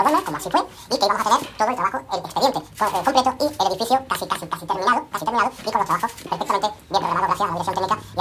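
Throughout, the audio has a wrong sample rate: everything runs at twice normal speed and an octave high, which fits 16 kHz material played at 32 kHz. Unlike a pitch shift or time-stretch, speed and pitch change together by the same ratio.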